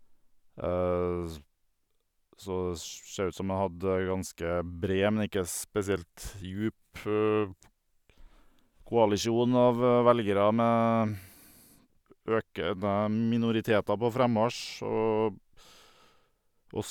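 No technical faults can be heard anywhere in this speech recording. There is no moment that needs to be marked.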